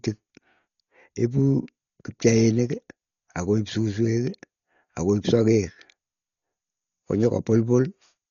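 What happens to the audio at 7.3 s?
At 7.3 s the speech carries the same damage heard across the whole clip. It sounds dull, with nothing above about 7 kHz. A rough, fluttering noise clings to the voiced sounds. The cause is likely Dolby Digital compression at a very low bitrate, one that fits around 40 kbps. At that rate the encoder narrows the band. Many frequency lines get no mantissa bits, and the decoder fills them with dither noise. The damage is heavy.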